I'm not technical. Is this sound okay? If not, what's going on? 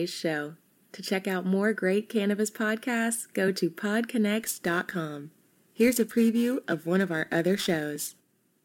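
No. From about 4.41 s to the end, the speech takes on a rough, metallic edge. This is periodic clock jitter: interference wobbles the recording's timing at roughly 2 kHz, adding extra tones beside the voice. Unlike hiss, it disappears in pauses.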